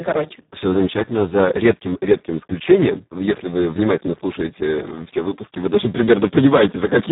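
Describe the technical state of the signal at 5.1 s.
At 5.1 s you're hearing heavy Speex codec damage, present throughout: a starved CELP excitation, fitting roughly 4 kbps, leaves the speech noisy and hoarse, with nothing above 3.8 kHz.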